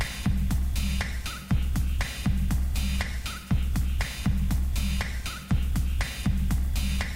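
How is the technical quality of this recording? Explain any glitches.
The recording has a persistent graininess from start to finish, consistent with low bit depth without dither. The audio sounds as if it is carried on only about 7 bits and rounded to the nearest step, so the error tracks the waveform instead of forming a steady hiss. That error sits only around 30 dB below the signal. Quiet stretches break up into gritty distortion, and the faintest parts sputter or collapse to silence. The likely cause is a coarse requantisation without dither.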